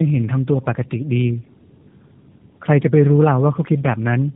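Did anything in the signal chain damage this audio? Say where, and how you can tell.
Yes. Tandem speech coding runs throughout, at the codec stage: nothing reaches above 3.8 kHz, and the sound is rough, muffled and warbly, pointing to two low-rate speech coders in a row, likely G.729A then AMR-NB, the second re-encoding the first's already degraded output.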